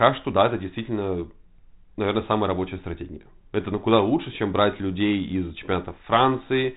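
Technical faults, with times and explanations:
No technical faults can be heard in this speech. The G.726 ADPCM path at 32 kbit/s shows only as a band limit with nothing above about 3.8 kHz and a light coding texture on the speech.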